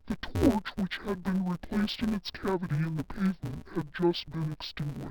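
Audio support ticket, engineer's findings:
Interleaved audio read as planar, throughout the clip. Deinterleave step likely misconfigured; buzz at 172 Hz fits 256-sample blocks of about 5.8 ms split into left/right halves. Speech sounds dull and robotic, no clear octave drop.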